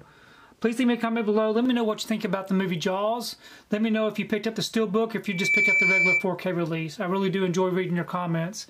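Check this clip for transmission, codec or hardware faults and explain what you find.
One hardware fault is present. From 5.25 to 6.29 s, a 2.3 kHz tone swells over about a third of a second into a squeal roughly 5 dB above the sound. This is loudspeaker feedback squeal, where the microphone re-captures its own loudspeaker and the loop gain exceeds one at that frequency.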